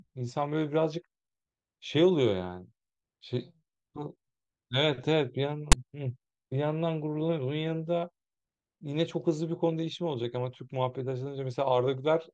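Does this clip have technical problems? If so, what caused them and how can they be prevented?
Yes. At 5.72 s the speech is cut by a very brief, hard-edged burst of loud rasp, offset to one side. This is file tags played as audio. Text metadata was decoded as sample values. The player should skip tag blocks rather than reading them as sound.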